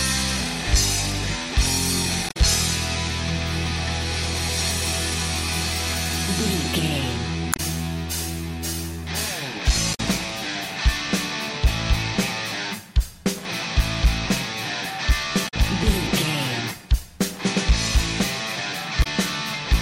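Brief glitches at 2.26–2.37, 7.50–7.60, 9.91–10.00, 15.45–15.54 and 19.00–19.07 s come from damaged data in a compressed stream, where the decoder misreads corrupted frames and loses sync.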